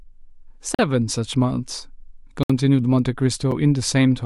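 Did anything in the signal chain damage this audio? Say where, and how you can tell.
Yes. The driver or buffer stage failed to deliver samples in time, leaving a block of digital silence three times: 0.75 to 0.79 s (about 43 ms, which fits a 2048-sample buffer going unfilled), 2.43 to 2.50 s (64 ms), and a brief 7 ms dropout at 3.51 s. Each gap drops the speech straight to silence and back with no fade. The two longer gaps sound like short holes, and the last sounds like a tick.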